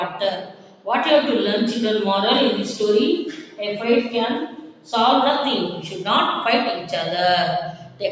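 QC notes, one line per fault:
Throughout: noise suppressor applied to non-speech sound. A speech-tuned suppressor keeps treating sustained, steady content as noise, so the level swings by around 10 dB as it clamps down and releases. The result is pumping and thinning rather than clicks or gaps, with attacks left mostly intact.
0.10–0.87 s, 3.30–3.60 s, 4.47–4.93 s, 7.72–8.02 s: sound cut by the noise suppressor. In each span, held or decaying sound sinks by about 10 to 11 dB and tails are shortened. Unlike a dropout, the sound never goes fully silent, and onsets survive.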